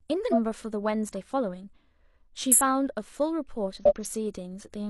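At 0.28 to 0.35 s, 2.47 to 2.61 s and 3.77 to 3.93 s the speech skips forward as compressed frames are skipped: whole frames never reach the output, so roughly 100 ms, then about 50 ms twice, simply vanishes. A waveform shows an abrupt change in envelope, and a spectrogram shows harmonics jumping discontinuously at each seam.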